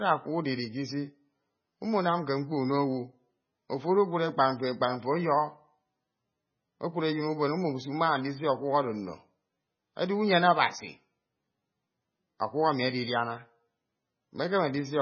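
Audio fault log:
Throughout, MP3 compression: nothing reaches above 6.5 kHz, and the speech sounds watery and swirly, with smeared onsets, heavy damage likely from a very low bitrate near 16 kbps. A spectrogram shows a flat ceiling at 6.5 kHz with flickering, speckled gaps beneath.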